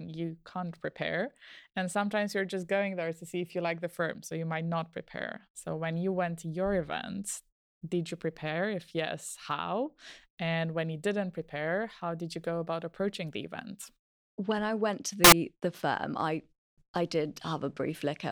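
At 15.24 s, right after "I went to", about 80 ms of the speech turns into samples built from the wrong bytes, lasting until 15.32 s, just before "the firm I I". Each sample's bytes were assembled in the wrong order or offset, so the rapidly changing low bits became the loudest part of every value, producing a harsh burst of loud broadband noise. Unlike a dropout or ordinary clipping, the speech isn't silenced or flattened; it is replaced by loud broadband noise.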